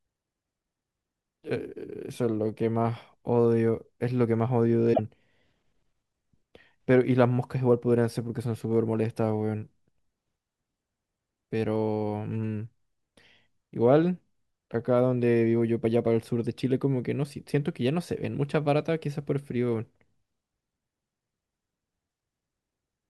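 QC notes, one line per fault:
4.90–5.00 s, damaged data in a compressed stream: corrupted frames make the decoder lose sync for about 0.1 s, producing a short glitch before it locks onto the next frame header.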